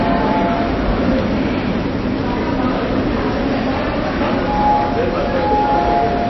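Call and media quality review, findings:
Audio throughout: nothing above 5.8 kHz, watery, swirling texture, smeared attacks. Likely MP3 compression at a low bitrate near 24 kbps. Bit-starved encoder cuts treble, drops weak frequency lines frame to frame.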